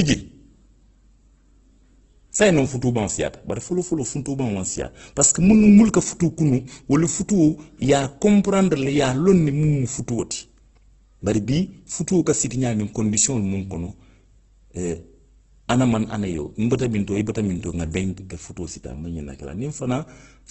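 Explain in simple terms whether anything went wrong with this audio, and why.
Heavy compression damage runs through the whole clip, likely from Opus compression. The speech sounds rough and grainy, and nothing above 8.1 kHz remains.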